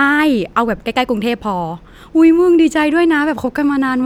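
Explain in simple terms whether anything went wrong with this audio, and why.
Nothing went wrong; no faults are audible anywhere here.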